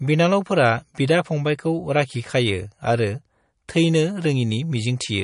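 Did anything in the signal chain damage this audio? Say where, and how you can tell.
Yes, at the codec stage, throughout the speech: nothing survives above 10.6 kHz, and the sound is watery and swirly, most likely from MP3 compression at a low bitrate, around 40 kbps. On a spectrogram that shows as a flat ceiling with flickering holes beneath it.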